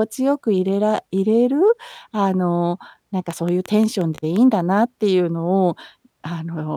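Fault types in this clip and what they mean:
Train of clicks: from 3.31 to 4.37 s, about seven near-identical pulses tick over the speech at a steady 5.7 per second, peaking a few decibels above it, likely from interference by nearby equipment or a faulty connection or power supply injecting repeated spikes.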